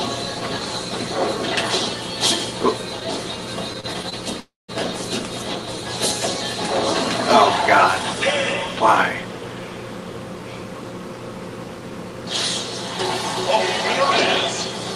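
From 3.73 to 4.14 s, repeated stalls (stutter): the jitter buffer ran dry five times, with the longest gap at 28 ms, each bridged by extending the last sound, so the audio drags and stutters.

At 4.40 s a call audio freeze holds the sound as a fading continuation that drops to silence for about 0.18 s, then resumes at 4.70 s. It was likely caused by delayed packets emptying the jitter buffer.

From 10.11 to 12.22 s, a jitter buffer speed-up trims short pitch-period slices to shed about a tenth of a second, so the audio plays 5% faster at unchanged pitch.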